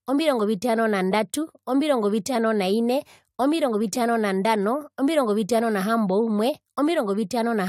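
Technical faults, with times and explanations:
No technical faults can be heard in this speech recording, and the signal holds steady with no dropouts, clicks, clipping or level jumps.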